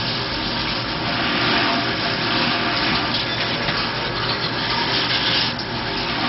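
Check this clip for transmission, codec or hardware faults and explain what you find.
There's one fault, and it runs the whole way through: MP2 compression. The sound is dull, with nothing above about 5.6 kHz, and has a gurgling, grainy texture. That's likely MPEG Layer II at a very low rate, roughly what 32 kbps would give, with upper sub-bands switched off and the remaining ones coarsely quantised.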